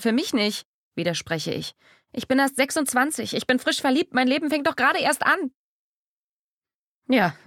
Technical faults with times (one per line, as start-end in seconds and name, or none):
none